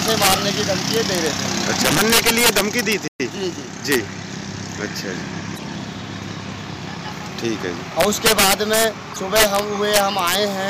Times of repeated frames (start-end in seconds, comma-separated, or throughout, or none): none